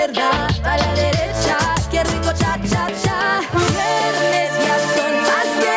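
Gain pumping runs throughout: the input gain was likely set too high, and a fast limiter keeps pulling it down, so the level swings by around 10 dB and the sound is squashed.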